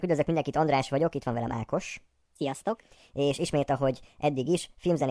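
From start to end, the speech runs about 1.38 times too fast and sits roughly 5.5 semitones high, the sign of a wrong sample rate. This fits 16 kHz audio played at 22 kHz. Unlike a pitch shift or time-stretch, tempo and pitch rise together.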